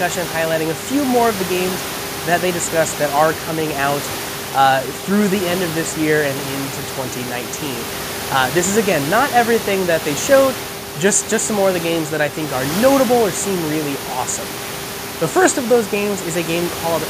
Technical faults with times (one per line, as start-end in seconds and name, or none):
none